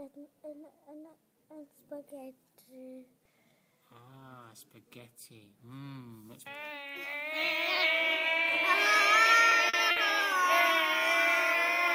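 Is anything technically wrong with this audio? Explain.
Yes. There are three short stalls from a late packet, at 9.49, 9.69 and 9.91 s. Each time a packet arrived late, the jitter buffer ran dry and the receiver held the last sound for 20, 40 and then 50 ms before resuming exactly where it stopped, so nothing is lost but each moment drags with a slight buzz or dip. On a spectrogram these appear as brief flat, frozen stripes. The waveform shows a small repeating stretch at each one.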